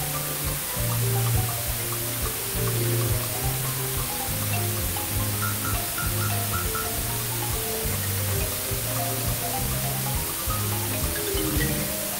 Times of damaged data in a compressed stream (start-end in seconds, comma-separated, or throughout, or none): none